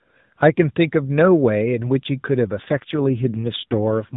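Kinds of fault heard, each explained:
AMR rate drop: from 2.62 s to the end the speech turns rougher and more synthetic with no gap and no narrowing of the band, which points to the mobile link stepping the AMR codec down from 12.2 to 5.9 kbps, fewer bits describing the voice.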